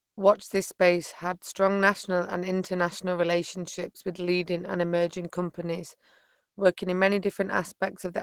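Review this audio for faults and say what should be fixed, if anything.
Opus compression runs through the whole clip, and the damage is plainly audible. The speech has that muffled, hoarse quality plus a grainy roughness in the upper range. This is likely from low-rate Opus, where the encoder runs in its hybrid speech mode and leaves too few bits to code the detail cleanly. The sound fits a rate around 16 kbps, even though the full bandwidth is kept. To prevent it, encode at a higher Opus bitrate or keep an uncompressed master for delivery.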